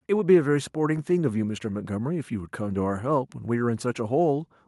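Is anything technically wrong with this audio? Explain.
No, nothing technically wrong turns up anywhere in this speech recording.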